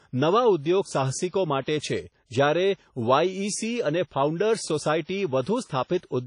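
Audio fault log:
throughout, WMA compression: speech sounds washy and ringing with breathing hiss, nothing above 10.1 kHz, likely a low-bitrate WMA encode around 32 kbps smearing quantisation noise.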